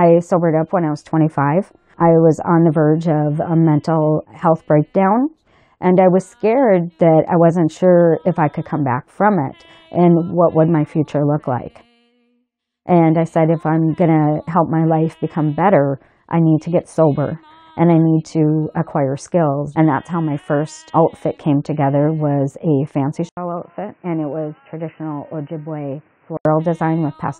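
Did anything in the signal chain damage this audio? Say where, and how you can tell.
Yes. At 23.29 s an 80 ms gap is followed by a sudden change: the sound turns dull and boxy with nothing above 3 kHz, the level falls by around 10 dB, and a new, different background noise sits well below the signal. This points to the input switched to a poorer device at the driver or device-selection stage, likely a fallback to another microphone or a headset call profile, until it recovers at 26.45 s.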